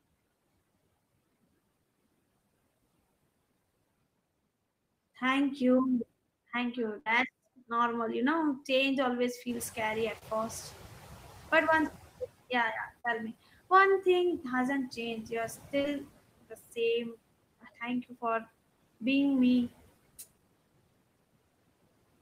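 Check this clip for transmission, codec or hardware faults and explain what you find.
Several faults are audible, all from the network path and the noise suppressor rather than from the hardware.

Noise suppressor artifacts run through the whole clip. The suppressor pulls the steady background down by about 20 dB frame by frame, so the noise drops away in the pauses and swells back under the speech.

A burst of packet loss occurs from 6.99 to 7.07 s. Roughly 70 ms of audio never arrived in time, and the receiver bridged the gap by extending the last sound for about 63 ms while fading it down. This is heard as a brief held buzz or decaying hiss, after which the audio jumps forward with that stretch missing.

The noise suppressor is catching up from 9.48 to 12.18 s. The room noise steps up by about 10 dB around 9.5 s, just after "know change always". That rise is genuine background in the room, not a system fault. 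The suppressor's noise estimate lags behind it, so the louder noise leaks through with little reduction at first. It then sinks over about 2.7 s until roughly 15 dB of cut is restored, before "yeah yeah tell me".

Short concealed packet loss appears three times: 10.19 to 10.22 s, 13.00 to 13.05 s between "yeah yeah" and "tell me", and 15.82 to 15.85 s. Each hole of 20 to 40 ms was filled by continuing the previous waveform or noise shape and then crossfading back into the real signal. The result is a momentary smear or wobble, and a short consonant can disappear.

Speech cut by the noise suppressor occurs at 16.42 to 16.78 s, 17.61 to 17.82 s and 18.03 to 18.24 s. In each case the suppressor treated part of the speech as noise and attenuated it, by about 18, 17 and 16 dB at its deepest. About a fifth of a second is affected in the first instance and about a tenth in each of the others. The affected speech there sounds swallowed or faint.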